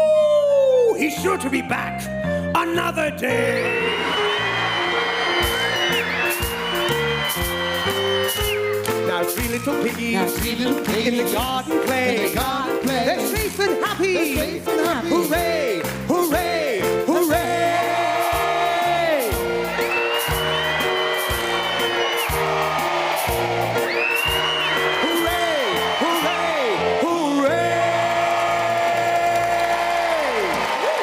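Nothing goes wrong at any point in this recording, so there's no fault to point out here.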